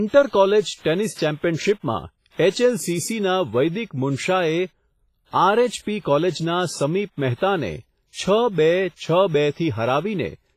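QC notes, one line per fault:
Throughout, low-bitrate audio saved at a high bitrate: the speech has nothing above 15.5 kHz and carries the smeared, swirly coding damage of a very low-bitrate encode, likely a roughly 24 kbit/s WMA-style pass later re-saved as 192 kbit/s MP3, which cannot restore what was removed.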